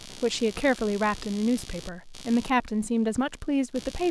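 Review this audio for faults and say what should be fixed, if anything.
Computer activity noise runs through the whole clip: changing load in the processor, graphics card or mouse is modulating the ground that the audio interface shares with the computer, and that ripple lands directly in the signal path. It is heard under the speech as a buzzy, chirping scratch pulsing at roughly 70 times per second, sitting around 20 dB below the speech. It tracks the machine's activity rather than the talker, so it persists through pauses. To prevent it, isolate the audio ground from the computer, using a USB isolator, a ground-lift or DI box, or an interface on a separate supply.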